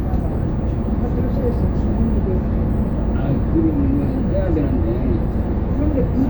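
A recording of everyday sounds, with no technical faults audible anywhere in it.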